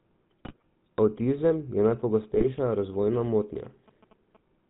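Throughout, the speech sounds buzzy and gravelly with nothing above 4 kHz, the GSM full-rate codec character of pulse-driven vocal-tract modelling, consistent with the 13 kbps coder.

From 0.45 to 0.62 s, and again from 2.34 to 2.47 s, the speech breaks into squawks and gargling. These are GSM bit errors, where corrupted filter, pitch or gain values distort several consecutive frames.

From 2.0 to 4.37 s, a galloping dit-dit-dit of short buzzes repeating at 217 Hz sits well below the speech. These are GSM signalling bursts from a nearby phone, rectified by the audio circuitry.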